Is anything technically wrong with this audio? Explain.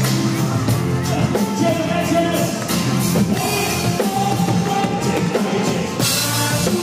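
Yes. From 4.05 to 6.54 s, ticks recur every 0.25 s: periodic USB or driver dropouts, where a stalled bus or driver skips a tiny sliver each time.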